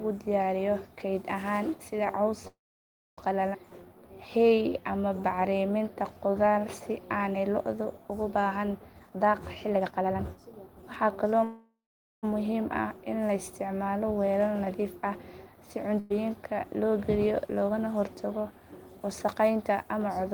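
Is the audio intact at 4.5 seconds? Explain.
No. From 3.71 to 7.18 s a jitter buffer slow-down plays the speech at about 90% speed, adding 354 ms as single pitch periods are repeated to rebuild the reserve. It sounds drawn out at unchanged pitch; the waveform shows identical repeated cycles, and spectrogram harmonics keep their spacing but stretch in time.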